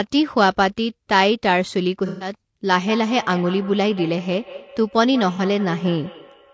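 Speech, heard throughout with low-delay AAC compression: the voice is plainly rough and grainy, with noise filling the gaps between harmonics, as short codec frames resolve pitch poorly and the thin bitrate, which fits around 32 kbps, likely points to AAC-ELD. AAC frame loss with concealment appears from 2.06 to 2.33 s, where about 150 ms of audio gives way to a smeared, noisy patch as the decoder rebuilds missing frames from the last good spectrum, and again at 5.36 to 5.40 s, a briefer 30 ms phasey blip. Feedback echo between two devices runs from 2.8 s to the end: a second device replays the call into the first microphone, so sounds return at roughly a fifth of a second, thinner and ringing, peaking about 16 dB below the speech. The call's microphone processing leaves nothing above 8 kHz.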